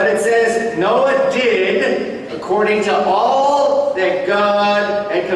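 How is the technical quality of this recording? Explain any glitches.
No glitches to explain; nothing in the recording departs from a normal capture.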